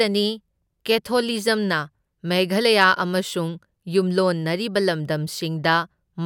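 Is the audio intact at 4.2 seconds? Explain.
Yes, the audio is intact at 4.2 seconds, with no fault audible at that point in the speech.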